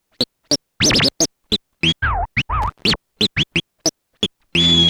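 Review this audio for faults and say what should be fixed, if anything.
Loose connector crackle from 2.62 to 2.91 s: a worn contact keeps breaking the signal, producing irregular scratchy bursts rather than evenly spaced digital dropout clicks. To prevent it, clean or replace the connector and secure the cable so it cannot move during recording.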